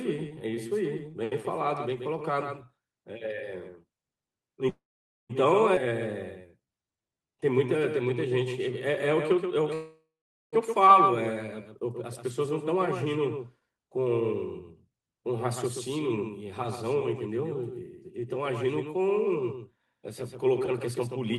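The clip is speech, and a doubled audio track runs through all of it. A second full-band copy trails the original by roughly 150 ms, at about 5 dB quieter. It has no decay or room colour, so it sounds like a hard slap-back rather than a reflection. The likely cause is the same audio being captured again by a slower path and mixed back in. A call audio freeze occurs from 4.69 to 5.31 s, filling about 0.6 s. The last sound is carried on briefly and fades, and about 0.5 s of that is silence. A second freeze runs from 9.74 to 10.54 s, filling about 0.78 s, with about 0.44 s of silence. In both cases the speech resumes where it stopped, and nothing is lost. The likely cause is delayed packets emptying the jitter buffer, which stretches the timeline. A skip ahead follows at 5.75 to 5.90 s. About 200 ms of speech is dropped, and the two sides are joined almost directly. This pulls the delay back by around 150 ms. 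From 6.42 to 7.39 s there is a jitter buffer slow-down. The receiver repeats single pitch periods to rebuild its reserve. Speech runs at 84% speed with the pitch unchanged, adding 167 ms. Sounds are drawn out.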